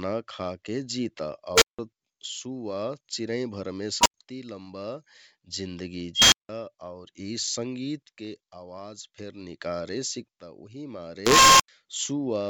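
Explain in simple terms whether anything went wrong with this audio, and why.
An unstable filter fault occurs four times: 1.54 to 1.79 s, 4.01 to 4.14 s, 6.15 to 6.49 s, and 11.26 to 11.68 s. A filter feeding back on itself swells into a squealing tone (around 500 Hz, 1 kHz, 3 kHz and 1 kHz), overloads, then briefly drops to silence.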